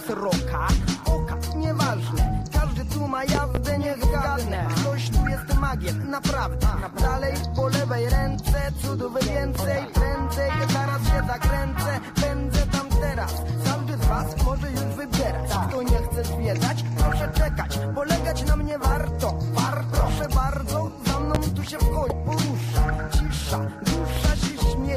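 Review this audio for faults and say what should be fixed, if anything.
Loud pops at 3.35–3.59 s (a quick double), 21.35–21.38 s and 24.17–24.20 s jump well above the sound, likely from voltage spikes off a plug, switch or static. Keep connectors seated and leave switches alone while recording.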